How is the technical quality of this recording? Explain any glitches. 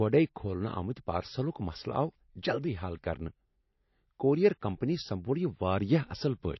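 The technical quality is poor throughout, because of plainly audible codec damage. The damage runs the whole length of the speech, consistent with likely MP3 compression. Nothing is heard above 5.8 kHz, so the treble sounds dull and clipped off. That cut-off fits a low bitrate of around 28 kbps. With so few bits, the encoder drops the top of the spectrum. It also zeroes weak frequency lines, which flicker on and off between frames. The result is a watery, swirling texture. S sounds turn metallic and chirpy, and consonant attacks smear.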